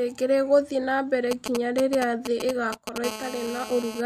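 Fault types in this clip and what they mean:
GSM signalling bursts: From 1.31 to 2.98 s, a galloping dit-dit-dit of short, raspy buzzes cuts across the speech. It is fairly loud, sitting only a little below it. The buzz inside each group repeats at about 217 Hz. A nearby 2G phone is exchanging signalling with its network in brief clusters of radio bursts, and the audio circuitry rectifies those pulses into audible clicks and buzz.
GSM phone buzz: From 3.04 to 4.01 s, the pattern becomes a continuous, hard, raspy buzz at 217 Hz, rich in harmonics and unrelated to the speech, about 12 dB below it. Its steadiness fits a phone that is now in a call, transmitting its time-slot bursts 217 times a second without a break. The audio circuit demodulates that radio pulse train directly into the sound.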